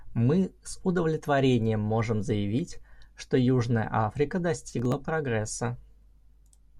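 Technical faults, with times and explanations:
4.73–4.94 s, processor overload crackle: a handful of tiny buffers, a millisecond or two each, miss their deadlines and are skipped, leaving hard-edged gaps heard as gritty crackle over the speech.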